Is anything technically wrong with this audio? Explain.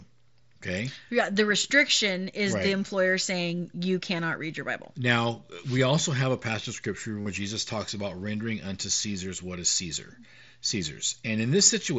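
Yes. At 7.23 to 7.26 s, just after "a passage of scripture", there is concealed Bluetooth headset packet loss. About 45 ms of headset audio went missing. The phone filled the gap by repeating the last matching stretch, which gives a brief buzzy tone and a small warble as the real sound returns.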